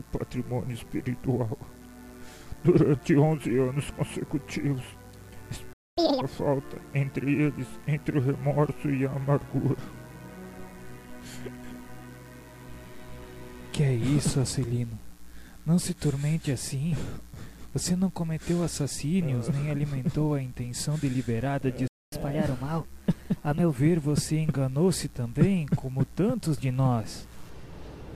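At 5.73 s the sound halts for about 240 ms, and again at 21.88 s for about 245 ms: a playback stall, likely the player starving for data or its thread being blocked. Unlike a dropout, nothing is skipped; the audio simply freezes, then resumes where it stopped.

Each stall is followed by catch-up at higher speed. From 5.97 to 6.21 s the backlog plays at double speed, pitched up nearly an octave. From 22.12 to 23.76 s it runs 1.15 times faster, about two semitones sharp. Speed and pitch rise together, then settle, which marks it apart from a steady pitch shift.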